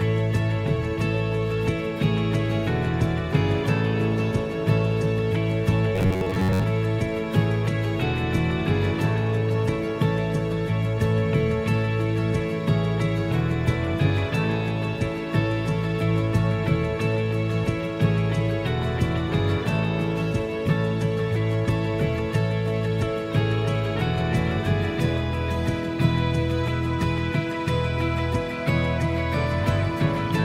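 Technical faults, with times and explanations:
5.96–6.64 s: robotic sound from repeated short buffers. A rigid metallic buzz sits near 94 Hz. This is likely from a slice of about 11 ms repeating over skipped audio.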